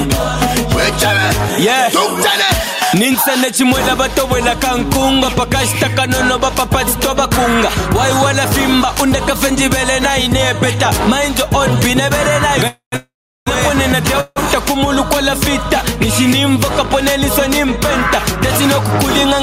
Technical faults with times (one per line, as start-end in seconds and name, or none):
0.00-19.43 gain pumping
12.67-13.48 call audio freeze
14.20-14.38 call audio freeze